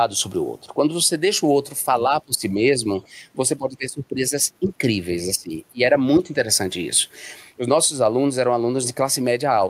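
Five times the speech gets pushed down in what sounds like speech suppressed in double talk: 2.25 to 3.24 s, 3.58 to 4.81 s, 5.26 to 5.53 s, 5.72 to 5.8 s and 6.18 to 6.32 s. The level sags by around 15 dB in most of them, nearer 20 dB at 5.26 s and only a few dB at 6.18 s, with the talker thinning or chopping in pieces. Likely the echo canceller couldn't tell this talker from the far end's echo while both spoke, so it clamped everything.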